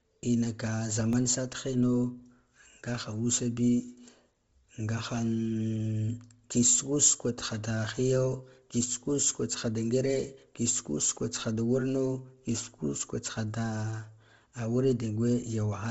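Speech, carrying Bluetooth LC3 compression throughout, likely from a low-bitrate LE Audio link. The sound stops dead at 7.7 kHz and has a breathy, grainy, noise-filled top, which points to about 24 kbps with 7.5 ms frames. A spectrogram shows a hard ceiling at 7.7 kHz with speckled noise fill beneath it. At 1.13 s a block of digital silence only 0.67 ms long (fitting a 32-sample block) is heard as a tick. The waveform shows a brief near-flat line with abrupt edges, and the spectrogram shows a thin vertical broadband stripe at that point.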